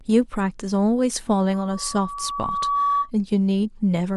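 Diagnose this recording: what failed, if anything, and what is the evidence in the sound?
Loudspeaker feedback squeal, playback loop: gain above one at 1.1 kHz swells a tone from 1.53 to 3.11 s to about speech level, a brightening spectrogram line.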